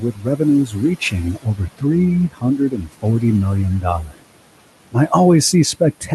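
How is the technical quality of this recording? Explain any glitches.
The quality is compromised by noise suppression throughout, and the suppressor also cuts into the speech in several places. Room noise sits about 19 dB below the speech, and the call codec trims the top end at around 12 kHz.

Noise suppressor artifacts are present through the whole clip. The suppressor judges which frequency bands hold steady background noise and pulls them down frame by frame, here by about 18 dB. Between phrases the background sinks away, then climbs back when speech resumes.

Speech cut by the noise suppressor occurs at 0.0–0.46 s (about 14 dB), 0.64–1.14 s (about 13 dB), 1.32–1.95 s (about 18 dB), 2.11–3.24 s (about 19 dB), 4.04–4.22 s (about 19 dB) and 6.01–6.12 s (about 9 dB). In each window the suppressor mistook quieter parts of the speech for noise and lowered them with the background. Only portions of each window are hit, most extensively in the 2.11–3.24 s stretch, and there the affected speech sounds swallowed or faint.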